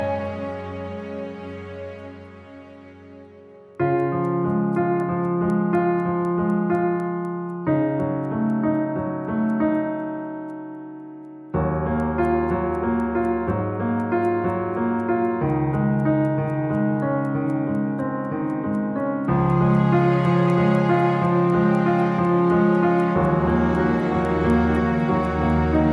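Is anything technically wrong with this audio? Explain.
Yes, there's a resampler restarted on every block, right through the clip. Each 250 ms chunk was converted separately, which sounds like a 48 kHz to 24 kHz conversion, so every chunk edge gets a small error. You hear a steady tick about four times a second, only while there's signal.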